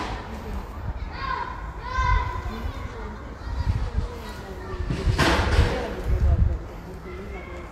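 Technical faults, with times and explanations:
3.99 s, compressed frames skipped: the sound lurches forward by about 70 ms. A few whole frames, fitting a 20 ms frame length, never reached playback, so the audio jumps ahead by the length of the frames left out.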